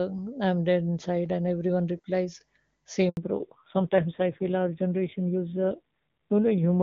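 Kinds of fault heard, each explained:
Handover gap: The call is passed from one network to another, and for that moment no speech frames get through. At 3.09 s the speech dies away within a few tens of milliseconds. There is 80 ms of silence before sound returns at 3.17 s. Anything said in that gap is lost, not delayed. The cut is short but clean. The silence is total.
Fallback to narrowband: After the handover the call does not return to HD Voice. From 3.17 s to the end, the sound points to a switch from wideband AMR at a high rate to a low-rate narrowband codec, around 5.9 kbit/s. Nothing above 4 kHz remains. Sibilants lose their crispness and the speech turns dull. The low rate adds a rough, buzzy texture. Before 3.09 s the wideband speech is clear.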